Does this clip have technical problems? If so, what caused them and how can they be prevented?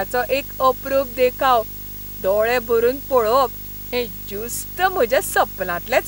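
Yes. Video or display buzz runs through the whole recording, under and between the speech. It is a coarse buzz at 50 Hz, the field rate of the picture, with a gritty hash riding above it. A very high whine sits at 15.6 kHz, the line rate. The interference is strong, roughly 15 dB below the speech. A screen or video cable is coupling its scanning signals into the audio path. To prevent it, route audio cables away from displays and video leads, and use balanced, well-grounded connections.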